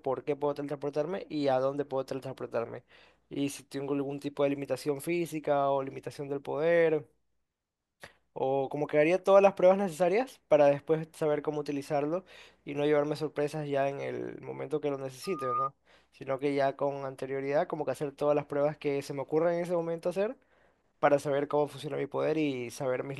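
At 15.23 s a loudspeaker feedback squeal breaks into the speech and holds until 15.71 s. The microphone is picking up the loudspeaker it drives, and at 1.2 kHz the loop gain passes one, so that tone feeds itself and swells over roughly a third of a second to about the level of the speech. On a spectrogram it is one bright horizontal line at 1.2 kHz that thickens and then stops. The waveform shows a steady sinusoidal envelope that grows.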